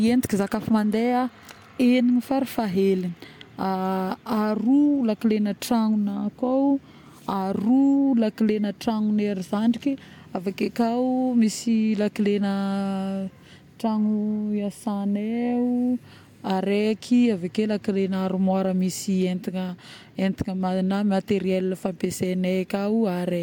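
No technical faults are audible anywhere in this speech recording.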